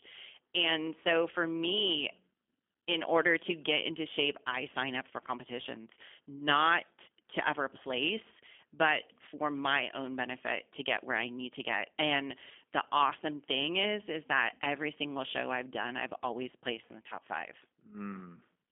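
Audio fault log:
Throughout, G.729 codec: speech sounds slightly rough and synthetic, rebuilt from a vocal tract model at 8 kbit/s. Plainly audible damage. Nothing above 3.5 kHz survives.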